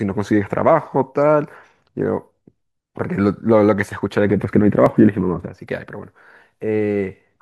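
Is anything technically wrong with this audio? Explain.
Yes. At 4.86 s there is an overlap between stream segments. Two adjacent segments, which appear to be about 2 s long, carry time stamps that overlap, so the player trims audio that was never actually duplicated. Roughly 8 ms of speech disappears, and the abrupt waveform jump is heard as a brief click or skip.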